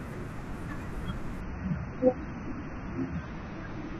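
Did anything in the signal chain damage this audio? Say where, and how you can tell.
Yes, at the network and codec stage: from 1.41 s to the end of the speech the adaptive stream switches to a lower bitrate. Quality changes abruptly with no gap. The treble disappears and the speech turns duller and swirly. On a spectrogram, energy above 6.3 kHz vanishes at 1.41 s, leaving a hard horizontal ceiling. The waveform stays continuous. The player fell back to a cheaper encoding, which fits a drop from roughly 96 to 24 kbit/s AAC.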